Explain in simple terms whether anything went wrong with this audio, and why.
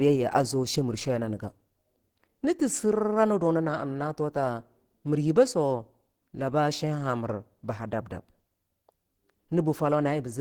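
Something did go wrong, and it lasts the whole clip. The speech sounds muffled and hoarse all the way through. The likely cause is heavy Opus compression. The file was squeezed too small, so the encoder rebuilt parts of the sound roughly instead of keeping them intact.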